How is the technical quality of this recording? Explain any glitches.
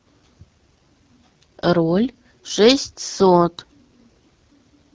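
The recording's technical quality is limited by one fault running throughout: AMR wideband (HD Voice) codec damage. The speech sounds plainly rough and raspy for the whole clip, which fits one of AMR-WB's two lowest rates, about 8.85 kbit/s. The pulse-driven vocal tract model can't track the voice finely at that rate. On a spectrogram, harmonics look smeared, structure ends near 6.4 kHz with only diffuse noise up to 7 kHz, and nothing appears above that.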